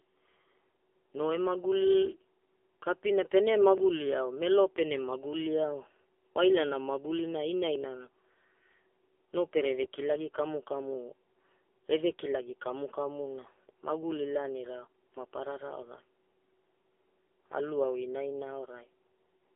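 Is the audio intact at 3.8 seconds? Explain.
No. At 3.78 s, between "kaina pene" and "ao melo pene", the speech skips: about 20 ms of audio is gone and the two sides butt together with no gap. This is audio missing between chunks, likely from the recorder losing a sliver while closing one 4-second block and opening the next. It sounds like a tiny jump. On a waveform, the cycles break abruptly at that point. A spectrogram shows a thin vertical seam where the harmonics shift without transition.

The same moment also carries the AMR narrowband mobile codec damage that runs through the whole clip. The speech sounds buzzy, thin and synthetic, which fits a low-rate AMR-NB mode around 6.7 kbps, where a coarse vocal-tract model driven by sparse pulses stands in for the real voice. On a spectrogram, energy is confined to roughly 300 Hz to 3.4 kHz, with nothing above 3.6 kHz and smeared, blocky harmonics.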